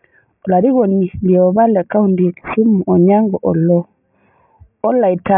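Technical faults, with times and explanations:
Throughout, aliasing: energy above 3 kHz folds back as gritty, metallic tones roughly 25 dB below the speech, consistent with downsampling to about 6 kHz without an anti-alias filter.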